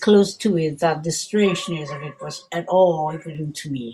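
From about 1.17 s to 3.35 s the speech turns hollow and phasey, classic channel delay comb filtering: one channel lags the other by roughly 5 ms, so the mono sum cancels at evenly spaced frequencies starting around 100 Hz, carving fixed notches.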